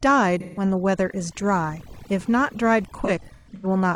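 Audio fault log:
throughout – overdone noise removal: the denoiser's cranked way too hard, so bands near its noise estimate get pulled down or switched off, taking quiet bits of the voice with them. The background drops and breaks up into twinkly specks.
0.40–0.63 s and 3.05–3.66 s – AAC frame loss with concealment: the decoder patches missing frames from the last good spectrum, so you hear smeared, phasey, noisy smudges. The first gap is about 170 ms, likely four frames. The later stretch loses about 340 ms in bits, the longest around 150 ms.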